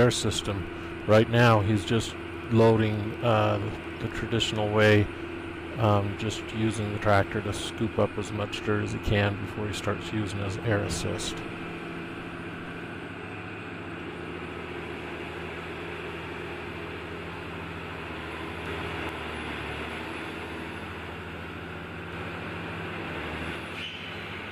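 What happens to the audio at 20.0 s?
Nothing goes wrong at 20.0 s; the audio plays through that moment intact, with no dropout, click, distortion or other fault.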